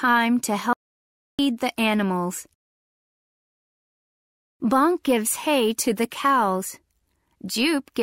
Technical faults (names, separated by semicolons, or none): audio dropout to silence